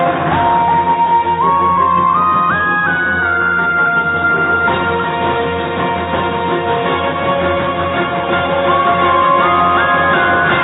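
No technical faults can be heard anywhere in the clip.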